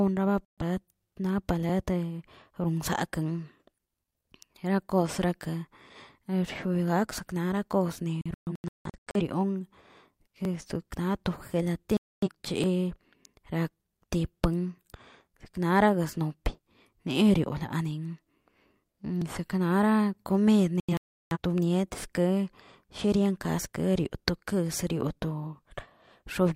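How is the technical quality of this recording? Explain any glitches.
The speech is broken by four digital broadcast dropouts, where the sound abruptly mutes and then resumes. The first, at 0.47 to 0.63 s, is a single gap of about 128 ms. From 8.21 to 9.21 s there is a cluster of short holes totalling about 597 ms, the longest 171 ms. A clean 256 ms gap follows at 11.97 to 12.28 s, and a second cluster at 20.80 to 21.37 s loses about 427 ms, mostly in one 341 ms stretch. The cause is the receiver losing the signal or rejecting corrupted frames and muting until valid ones arrive. The gap lengths fit whole frames of roughly 43 ms each, and whatever was broadcast during those mutes is gone.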